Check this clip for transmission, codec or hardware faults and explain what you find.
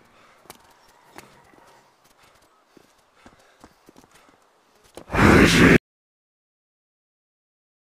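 There's one fault, an audio dropout to silence. At 5.76 s the sound cuts off mid-flow and stays dead silent, with no room tone at all, right through to the end, about 2.2 s. The input was likely lost, through a disconnected device, a failed link or a stray mute, while recording carried on writing silence, so whatever followed is gone.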